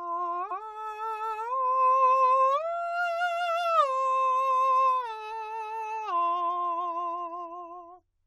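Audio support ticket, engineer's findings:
Repeated frames, 0.50 to 0.62 s in the music: a 116.1 ms block plays one extra time, audible as a stutter. Probable component is the encoder output or transport, writing or sending the same run twice; length fits five compressed frames. Clip lengthened by 116.1 ms.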